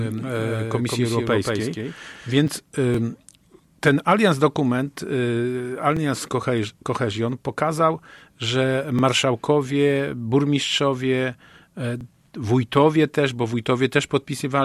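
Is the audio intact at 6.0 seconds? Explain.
No. Just before 6.0 seconds, from 5.97 to 5.99 s, there is an overlapping chunks fault. The audio was handled in blocks of about 3.0 s, and the next block began before the previous one had finished. About 21 ms of sound therefore plays twice at the join. It is heard as a brief click or stutter, a tiny hiccup where the same fragment repeats.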